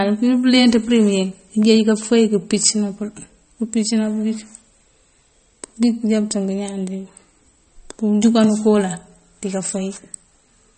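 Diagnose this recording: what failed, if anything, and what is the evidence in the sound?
Codec stage: the speech has nothing above 8.4 kHz throughout and watery, swirling artefacts on sibilants, likely MP3 compression at a low bitrate, around 33 kbps.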